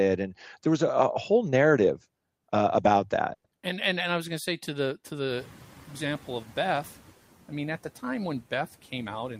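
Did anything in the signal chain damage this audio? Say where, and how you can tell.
Yes. Right after "whole narrative uh about", at 3.33 to 3.46 s, the sound trails off into a brief fading buzz and roughly 70 ms of silence, then resumes with nothing skipped. This is likely a call audio freeze: delayed packets emptied the jitter buffer, inserting about 110 ms of delay.

In call processing, the noise suppressor is catching up from 5.29 to 7.07 s, between "say to the to" and "I mean at the". The room noise jumps by about 24 dB around 5.5 s and initially comes through with less reduction. It then sinks as the noise estimate adapts, ending about 7 dB lower.

The jitter buffer speed-up comes after "at the time when", from 8.98 to 9.39 s. The speech sounds rushed at 111% speed with unchanged pitch. The receiver, holding excess buffered audio, trimmed short pitch-period slices repeatedly, removing about 50 ms to reduce latency.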